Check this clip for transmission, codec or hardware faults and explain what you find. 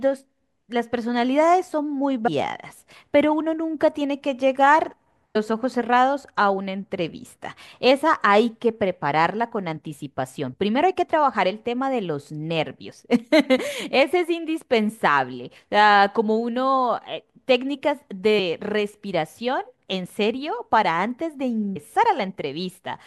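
Compressed frames skipped: there are four places where the speech jumps forward, at 2.26 to 2.28 s, 5.35 s, 18.38 s and 21.75 s. Chunks of the encoded stream never reached the output, so playback leaps ahead in whole 26.1 ms frames. It drops about 200 ms, about 400 ms, about 70 ms, and about 200 ms. Because adjacent frames overlap, each join comes out as a short smeared blip rather than a sharp click.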